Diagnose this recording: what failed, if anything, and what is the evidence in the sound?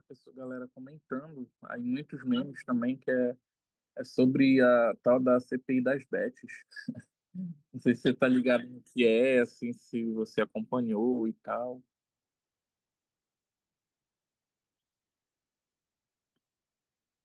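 Microphone volume stepped up at 1.02 s and again at 2.04 s: call processing raised the device input gain, lifting speech and background together by about 7 dB, then about 4 dB.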